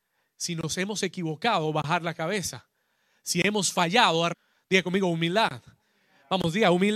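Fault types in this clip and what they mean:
Stream segment skipped: right after "hemos fallado", at 4.32 to 4.34 s, the speech jumps abruptly ahead with a short blip, as if a stretch of the talk is simply missing; the likely cause is a segment that failed to load, so playback continued with the next one.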